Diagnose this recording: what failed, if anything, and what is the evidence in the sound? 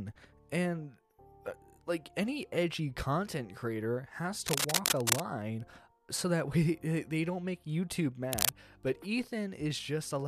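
The analogue wiring likely has a worn cable or connector whose contact resistance jumps as it moves. Cable scratch noise appears as dense, ragged rustling from 4.48 to 5.2 s, about level with the sound, and again from 8.32 to 8.49 s, somewhat louder.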